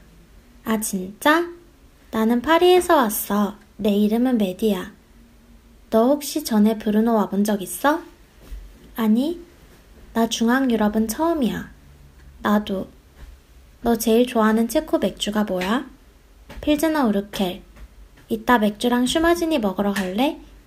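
Nothing is technically wrong with this clip.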